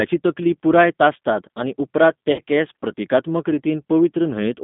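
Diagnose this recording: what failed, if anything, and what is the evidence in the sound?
The codec stage carries the first fault: the G.729 codec's damage is plain throughout. Nothing sits outside roughly 150 Hz to 3.6 kHz, and the speech has a rough, synthetic edge from 8 kbit/s pulse-based reconstruction. A spectrogram shows a hard ceiling with smeared, grainy harmonics.

The network stage accounts for VoIP packet loss concealed by the speech codec, from 2.32 to 2.41 s. About 60 ms went missing, which fits six 10 ms frames. The decoder extended its last pitch and filter with the gain lowered frame by frame, so the filled-in sound fades. The waveform shows a smooth, decaying stretch.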